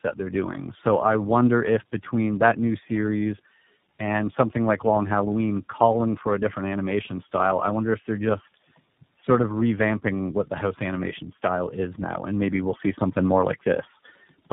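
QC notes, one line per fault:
Throughout, tandem speech coding: AMR-NB then iLBC each recode the previous coder's losses, so speech sounds rough, muffled and warbly; the spectrogram shows nothing above 3.8 kHz.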